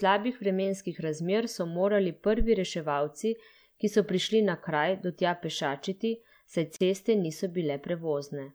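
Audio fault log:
6.76–6.81 s, gap at a join of encoded pieces: just after "do tja pešačiti saj" the speech breaks into a 41 ms gap with smeared edges, then resumes at "ceste niso". Separately encoded segments were joined untrimmed, keeping the encoder's start-up delay and final-frame padding.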